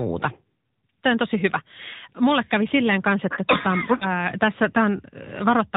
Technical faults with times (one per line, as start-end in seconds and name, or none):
0.00-5.77 AMR narrowband mobile codec
3.98-4.13 lost AMR speech frames